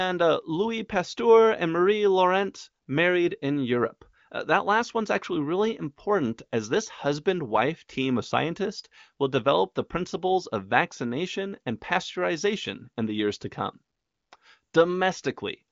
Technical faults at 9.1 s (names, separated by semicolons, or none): none